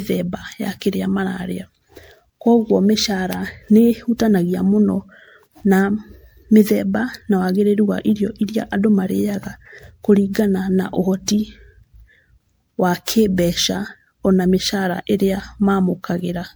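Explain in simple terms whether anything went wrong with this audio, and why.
Generation loss runs through the whole clip: the speech sounds swirly, hollow and smeared, with blurred starts to sounds. This is likely from being saved as an MP3 around seven times over, each re-save adding fresh compression damage on top of the last.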